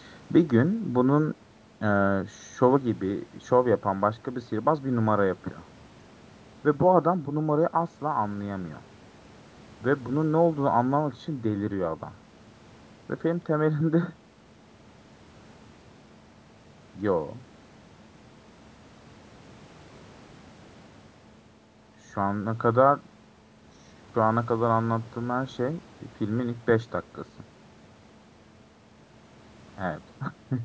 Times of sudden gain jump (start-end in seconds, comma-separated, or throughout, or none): none